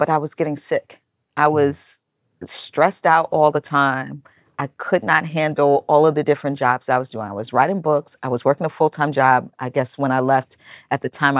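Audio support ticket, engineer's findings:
Listened through the speech recording and nothing stood out; no findings to log.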